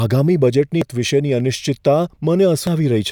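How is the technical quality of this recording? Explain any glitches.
The recording has two brief glitches from damaged data in a compressed stream, at 0.82 s and 2.67 s. Corrupted bytes make the decoder misread frames and resynchronise. Each is heard as a short chirp, squawk, click or hole in the speech.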